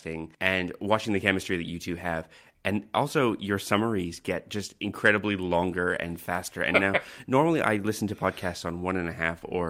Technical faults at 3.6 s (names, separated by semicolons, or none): clock drift between sender and receiver